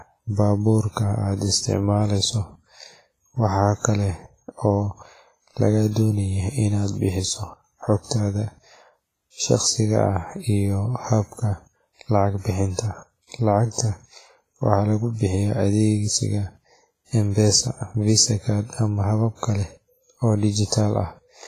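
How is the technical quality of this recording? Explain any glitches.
The quality's fairly rough, with heavy codec damage across the whole speech clip. It's likely WMA compression: the sound rings and smears, with a hiss that swells and fades with the voice, nothing above 15.3 kHz, and thinned-out detail that fits a low bitrate around 24 kbps, where long transform blocks spread quantisation noise and zero out weaker content.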